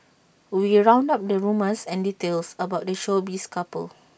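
No technical faults can be heard anywhere in this speech recording. There is nothing to time, measure or explain.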